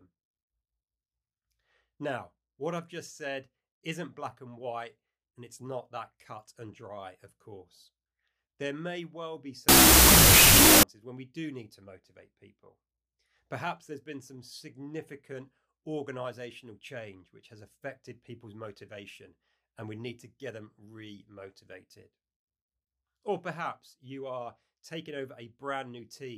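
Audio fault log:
9.69–10.83 s, wrong sample width: the speech drops into a roar of loud noise, with the underlying voice faintly audible, slowed to half speed and an octave low. This fits 32-bit float data being read as 16-bit integers. Each four-byte value gets split into two integer samples, which doubles the sample count and halves the speed. Only the half holding the float's sign and exponent keeps any trace of the signal, so the rest becomes broadband noise.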